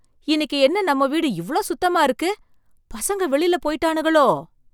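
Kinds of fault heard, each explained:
Nothing stood out on listening to the speech in this recording.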